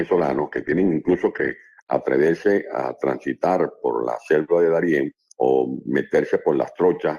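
For the first 2.0 seconds, the sound plays from an adaptive stream starting at a low bitrate. The player opened on a cheap version to start fast. It switched up once the connection was measured. Until 2.0 s, nothing is heard above about 12.2 kHz. Codec artefacts are stronger and the top end is thin. The sound points to Opus at around 16 kbit/s. At 2.0 s the quality jumps, with no gap, to something like 64 kbit/s.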